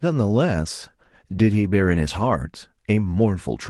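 At 0.82 s the speech passes through a call bitrate drop, and it lasts until about 2.33 s. The Opus encoder in the call path, which normally carries content up to 12 kHz, is forced onto a much leaner bit budget, consistent with a fall from 32 kbps to about 18 kbps, held at its lowest for 1.45 s. Coarser coding makes the speech sound rough and watery. On a spectrogram the harmonics look smeared and blotchy; the waveform barely changes.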